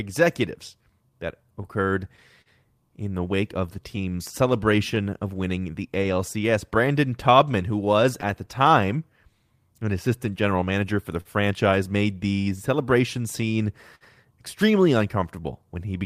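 Clock drift between sender and receiver runs through the whole speech clip. The sender's clock is slow by about 4 percent. The receiver's buffer keeps draining.

From 0.81 to 15.86 s, repeated timing corrections follow. Short pieces are repeated to fill the shortfall, adding roughly a third of a second. Playback sits at 98 percent speed, with a faintly uneven tempo.

Scattered short gaps appear from 1.50 to 2.49 s, then 3.96 to 8.50 s, then 12.50 to 14.04 s. Late packets left small holes. Each was patched by extending the last sound, giving brief smears and ticks.

From 11.21 to 11.28 s comes a short stall from a late packet. The buffer ran empty. The sound is held 44 ms too long, then resumes with nothing lost.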